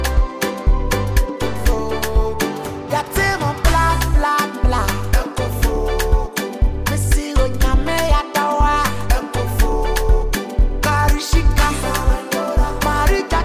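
Nothing technically wrong turns up here, with no faults to point to anywhere in the audio.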